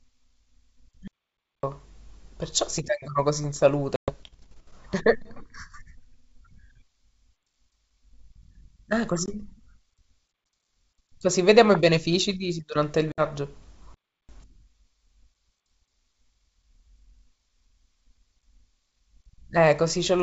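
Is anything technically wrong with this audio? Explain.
Yes, there are two kinds of fault in this speech, heard through G.722 wideband telephone coding at 64 kbit/s, which keeps speech clear up to about 7 kHz with only a faint upper-band hiss.

Playback stall, from 1.08 to 1.63 s and from 13.94 to 14.29 s. The output goes silent in mid-flow for about 0.56 s and then about 0.35 s, before the speech continues. The likely cause is the player starving for data or having its playback thread held up, so nothing reaches the output until it recovers.

Packet loss on an ADPCM call, at 3.96 to 4.14 s, 9.26 to 9.34 s and 13.12 to 13.22 s. Roughly 120 ms, 20 ms and 60 ms of audio go missing, in runs of several packets, one packet and a few packets. Each gap is filled with hard-edged silence. Because ADPCM codes each sample relative to an adaptive prediction and step size, the receiving decoder loses track of the sender's state. 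When speech returns it comes back slightly distorted, then settles within tens of milliseconds.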